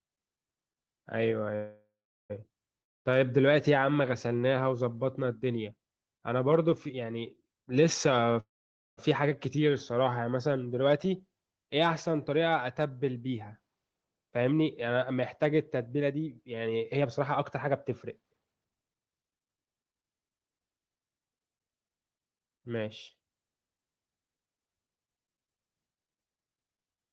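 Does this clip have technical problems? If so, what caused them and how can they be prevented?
Yes. Call audio freezes at 1.55–2.32 s and 8.40–8.99 s: the sound turns into a fading buzz and then goes silent before resuming where it stopped. This likely comes from delayed packets emptying the jitter buffer, which inserts 0.74 s and 0.57 s of delay. A larger adaptive jitter buffer or a more stable network path would prevent this.

A long network dropout occurs at 2.82–3.15 s. A fading fill gives way to silence, and the sound returns with roughly 0.24 s lost, likely because packets never arrived. Forward error correction or packet redundancy would help cover such losses.

A jitter buffer speed-up runs from 13.67 to 20.39 s. Audio plays at about 120% speed at unchanged pitch, sounding hurried, as short pitch-period pieces totalling about one and a half seconds are cut. Gentler buffer-reduction settings would spread this catch-up more thinly.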